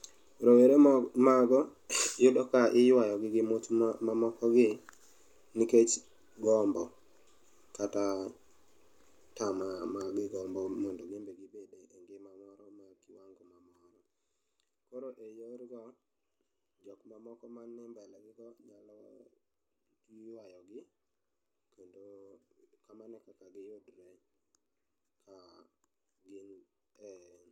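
A speech clip in which, from 10.88 to 11.54 s, a fast ticking, zipping texture rides on the voice as its level drops by roughly 20 dB. This is zipper noise: the gain is lowered in 2 dB steps with no smoothing between them, around twenty steps a second, and each abrupt jump puts a small click into the waveform.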